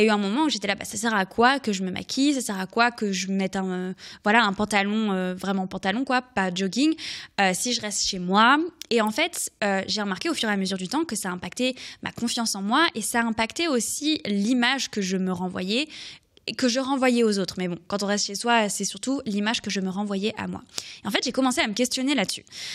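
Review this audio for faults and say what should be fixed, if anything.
There's an electrical switching spike at 9.07 s, a quick, fairly quiet snap over the speech, likely a nearby switch or static discharge arcing into the line. Keep switches and motors away from audio cabling, and use balanced, shielded runs.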